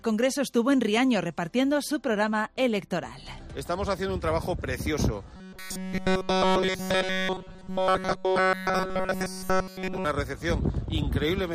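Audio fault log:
5.36–10.04 s, robotic sound from repeated short buffers: a rigid metallic buzz at 188 Hz replaces essentially all the audio, likely from a roughly 5 ms buffer replayed while fresh audio is skipped. Unlike flanging, the pitch stays fixed instead of sweeping.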